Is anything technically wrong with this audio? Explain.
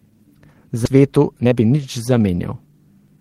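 Yes. There are two faults.

At 0.85 s there is a skip ahead. About 0.7 s of speech was dropped, either in transit or by an overflowing jitter buffer. Playback jumps straight to later audio with no filler. The two sides join almost directly, so material is simply missing.

From 0.95 s to 3.17 s there is a jitter buffer speed-up. The buffer held too much audio. It trimmed short pitch-period pieces, removing about 0.3 s in total. The speech runs at 113% speed at unchanged pitch and sounds hurried.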